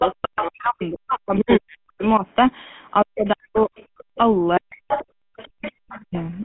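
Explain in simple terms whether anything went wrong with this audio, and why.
GSM full-rate codec, throughout: the speech has a buzzy, gravelly roughness and sounds muffled, with nothing above about 3.4 kHz. This old phone codec rebuilds the voice from a simple model of the throat and mouth, driven by a coarse pulse pattern, which discards much fine detail.

Speech suppressed in double talk, at 0.00 to 2.24 s, 3.03 to 3.74 s, 4.59 to 4.77 s and 5.31 to 6.15 s: the main voice sinks sharply or drops out in pieces. Both sides were likely talking at once, and the echo canceller, unable to separate them, turned everything down.

Other side's voice leaking through, at 0.00 to 0.45 s, 3.25 to 4.18 s, 4.73 to 5.05 s and 5.37 to 6.00 s: a second voice can be heard. It is nearly as loud as the main speech in the first and third stretches and faint in the others. The likely cause is that the talker's loudspeaker carried the other person into the microphone and the echo canceller failed to remove it.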